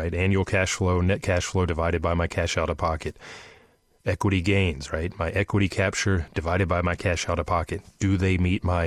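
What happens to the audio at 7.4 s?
Nothing goes wrong at 7.4 s; the speech carries on intact through that moment.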